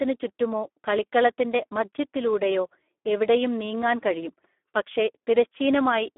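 From start to finish the speech sounds hoarse, buzzy and rough. The band is narrow, thin below roughly 250 Hz, and nothing is heard above 3.8 kHz. This is heavy Speex codec damage: the CELP coder has too few bits to model the excitation, so the voicing turns noisy and synthetic, and the telephone-like band of about 250 Hz to 3.5 kHz fits a low setting of around 8 kbps.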